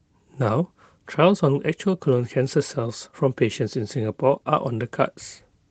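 No technical faults can be heard in this speech recording, which carries the light, expected marks of Opus voice compression in hybrid mode at around 20 kbps with the full audio band kept.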